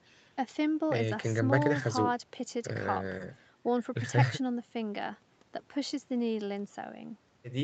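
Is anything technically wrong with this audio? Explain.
No, nothing stood out as technically wrong on listening to this speech clip.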